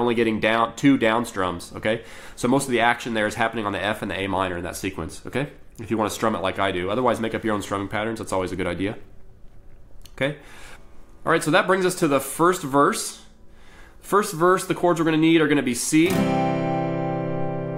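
Nothing goes wrong anywhere in this recording, so there's no fault to point to at any moment along the way.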